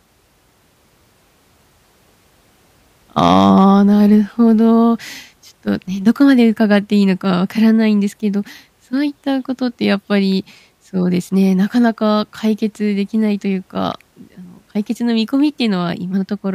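From 3.18 to 3.70 s the speech shows hard clipping: the level is pushed about 4 dB beyond what a stage in the chain can pass, so peaks are sliced flat. Those squared tops generate high harmonics, heard as crackly distortion on the loud moments.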